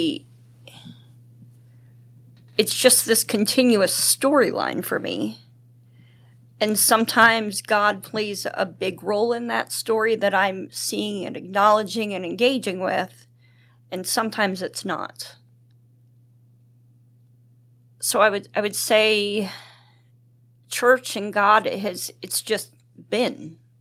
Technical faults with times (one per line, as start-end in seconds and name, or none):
7.21-7.26 microphone overload
7.26 microphone volume stepped down